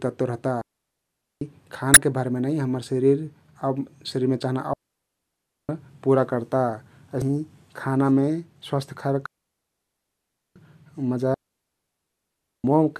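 At 0.61 s, just after "तत्व रहता", the speech cuts to near silence until 1.41 s. This is a digital wireless dropout. The receiver lost too much of the radio data and muted for about 0.8 s. The hole is clean. No noise burst comes before or after it.

From 1.94 to 1.97 s a short blip breaks in. This is damaged data in a compressed stream. Bad bytes made the decoder misread its frames. It lost sync and hunted for the next frame header.

A second dropout runs from 4.73 to 5.69 s, between "शरिरमे चहना" and "पुरा कर्ता". It is the same clean mute, lasting just under a second.

Another corrupted-stream blip follows from 7.19 to 7.22 s. It is the same kind of glitch as the decoder resyncs.

Two more dropouts close the clip, from 9.26 to 10.56 s and from 11.34 to 12.64 s. Each mutes for 1.3 s.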